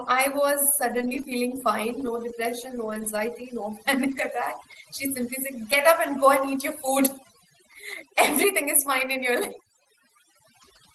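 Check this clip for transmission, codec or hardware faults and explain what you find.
Four transmission faults and one processing fault are audible on this speech, carried over an Opus call path whose audio stops near 12 kHz.

Overdone noise removal, throughout: aggressive suppression zeroes bands near the noise estimate, leaving near-silent gaps with twinkling specks.

Lost packet rebuilt from error correction, at 0.89–1.19 s (just before "feeling fine"), 2.85–2.99 s and 4.07–4.25 s: low-bitrate redundant copies filled each loss, so nothing drops out, but those stretches sound rougher and noisier.

Short concealed packet loss, at 1.21–1.25 s, right before "feeling fine": the decoder extended the preceding sound across a missing slice, producing a brief smear or wobble.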